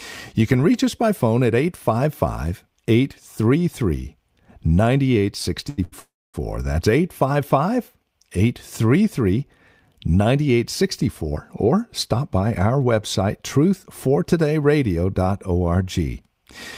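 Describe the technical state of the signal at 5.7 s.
A short stall from a late packet runs from 5.69 to 5.80 s. The jitter buffer ran dry, so the speech is held for about 84 ms, then it resumes without losing any content.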